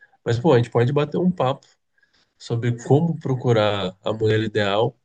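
No technical faults can be heard in this recording.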